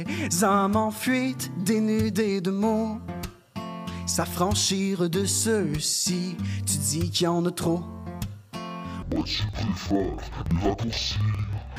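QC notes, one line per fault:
9.02–11.79 s, interleaved audio read as planar: the sound drops a full octave, doubled and choppy, with a flutter at about 21.5 Hz through to the end. Alternating left/right samples are being split so that each block's first half feeds the left channel and its second half the right. Each half then plays stretched to twice its length, and the two overlap to keep overall pace. The 46.44 ms block period fits a 2048-sample block.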